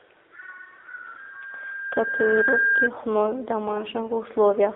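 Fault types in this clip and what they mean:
AMR narrowband mobile codec: low-rate mobile speech coding near 7.4 kbps, band-limited to roughly 250 Hz–3.6 kHz, giving a plainly buzzy, synthetic voice throughout.
AMR bit errors: corrupted low-priority frame bits from about 3.68 to 3.84 s misplace excitation pulses, making the voice briefly hoarse, scratchy and gargly.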